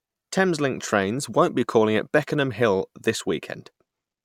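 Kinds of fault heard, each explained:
No technical faults are audible anywhere in the speech, so there is nothing to list.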